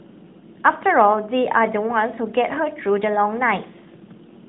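No technical faults can be heard anywhere in the speech. It is carried through the AMR narrowband mobile codec, which keeps everything below 4 kHz and adds only a light synthetic edge from the codec.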